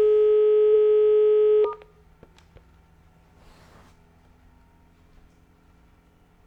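At 0.70 s and again at 2.65 s there's a quick stutter from repeated frames: a 46.4 ms chunk of the sound plays, then plays once more straight after. That length fits a single compressed frame getting written or sent twice, so the decoder replays it. You hear a little hiccup, and each one pushes the rest of the audio 46.4 ms later.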